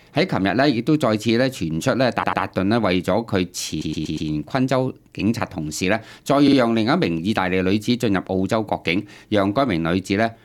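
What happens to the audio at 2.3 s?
From 2.22 to 2.41 s the sound stutters: a 96 ms stretch is heard three times in a row, the original plus two extra plays. This is repeated frames. A short run of compressed frames, which fits a block of about four frames, was sent or written more than once, so the decoder played the same fraction of a second again before continuing. The repeats add 192 ms to the audio and delay everything after them.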